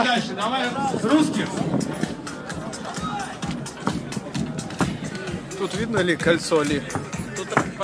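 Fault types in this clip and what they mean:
No faults detected in this clip; nothing audible to flag.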